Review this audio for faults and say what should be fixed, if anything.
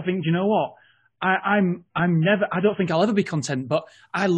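From 0.0 to 2.88 s the speech has missing or synthetic treble and stronger codec artefacts: an adaptive stream starting at a low bitrate, consistent with AAC near 16 kbit/s. At 2.88 s quality jumps without a gap, fitting a step to about 96 kbit/s. Start playback on a mid-tier rendition or seed the bandwidth estimate from earlier sessions.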